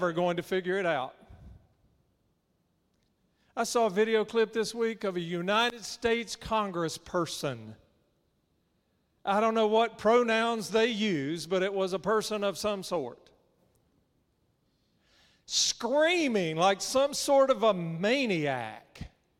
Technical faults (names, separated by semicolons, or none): none